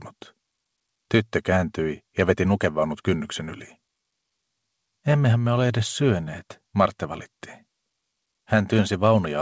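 No faults can be heard.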